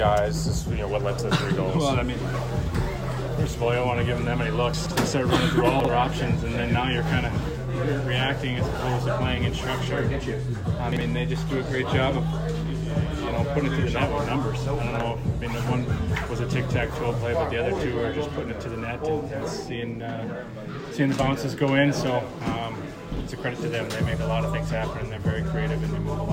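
Chunks out of order at 4.74 to 4.91 s, 5.80 to 5.89 s, 10.92 to 11.01 s and 23.13 to 23.21 s: 42.67 ms blocks play late, three blocks behind at first, one thereafter. Nothing drops out, but the sound jumbles briefly at the hard joins.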